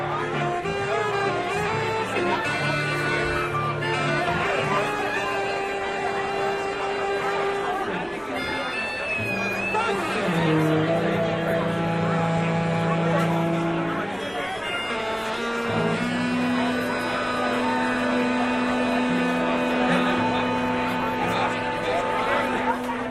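A recording of sounds with two lost LE Audio frames, one at 21.01 s and another at 22.57 s, each a gap of about 10 ms, which fits a single dropped frame. At each spot the LC3 decoder filled the hole by repeating the last spectrum with scrambled signs, so you get a brief noisy smear rather than a clean gap. Both gaps are too short for the fade-out to kick in. There is also light lossy compression underneath.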